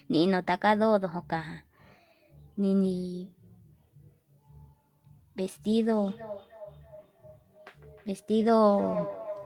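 From 5.78 s to the end at 9.46 s, feedback echo between two devices returns each word about every third of a second, peaking about 13 dB below the speech. Reverb would smear continuously instead.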